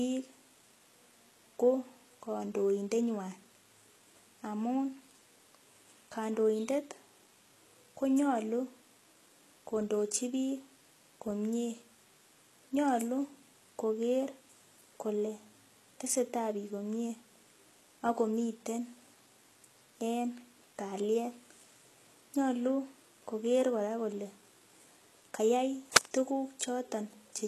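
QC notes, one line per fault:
Throughout, likely HE-AAC compression: treble is synthesised from lower bands, so s sounds turn gritty and lispy; nothing above 12.3 kHz, which fits a bitrate near 16 kbps.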